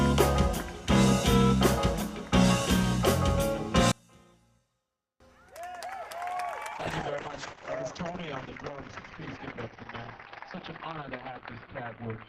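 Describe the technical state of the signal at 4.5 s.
At 4.5 s the signal falls away sharply, by about 34 dB, from 3.92 s to 5.20 s. The collapse points to one channel inverted. That is likely the cause. With one side's polarity flipped, everything common to both channels cancels when they are summed to mono. Centred material and low end all but disappear. What survives is only the difference between the channels, heard as a faint residue of the sound until the level returns at 5.20 s.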